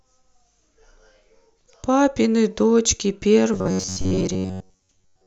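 Speech, with robotic sound from repeated short buffers from 3.54 s to the end at 5.26 s. A rigid 93.8 Hz buzz replaces most of it, likely from a 10.7 ms buffer repeating.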